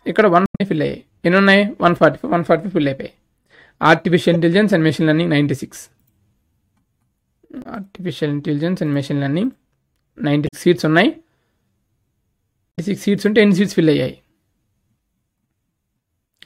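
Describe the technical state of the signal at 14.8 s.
Nothing at 14.8 s disturbs the signal: the audio there is intact, with no dropout, glitch or distortion to be heard.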